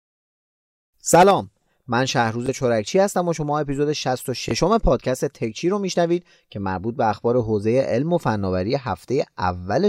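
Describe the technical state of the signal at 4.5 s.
A Bluetooth stutter occurs from 4.49 to 4.51 s. A short gap in the wireless stream, about 21 ms of missing audio consistent with a single lost packet, left the receiver with nothing new to play, so it repeated its most recent buffer of speech to fill the hole. The result is a brief doubled fragment, a tiny catch or blip in the speech. When fresh data returns, playback resumes further on, as though the lost slice had played.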